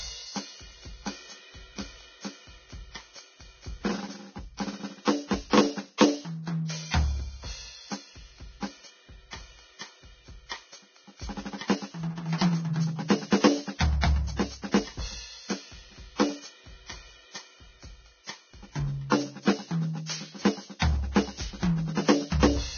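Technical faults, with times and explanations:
Throughout: Vorbis compression, likely at a very low rate near 18 kbps, is heavily damaging this music. Nothing remains above 6.5 kHz, and the surviving treble is coarsely quantised into grainy hiss. On a spectrogram, a flat ceiling at 6.5 kHz sits above speckled, noisy upper bands.
5.97, 14.01 and 20.79 s: pre-echo. Before each sharp attack, a short hiss lasting about 22 to 26 ms rises, because the quantisation noise sized for the loud onset is spread across the quiet start of its transform block. The waveform shows a low fuzzy patch ahead of each transient.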